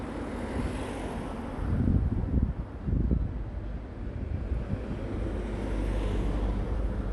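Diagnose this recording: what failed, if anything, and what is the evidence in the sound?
The codec stage failed. Throughout, nothing is heard above 11.4 kHz, and the top end sounds dull. A rough, fluttering noise clings to tonal parts. This is likely Dolby Digital compression at a low bitrate, consistent with 64 kbps, where starved frequency lines are filled with dither noise.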